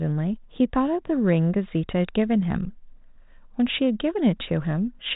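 Nothing stood out on listening to this speech recording.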